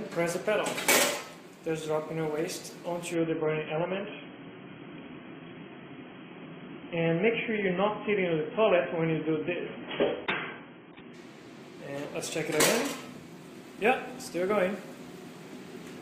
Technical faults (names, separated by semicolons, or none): adaptive stream at a lower bitrate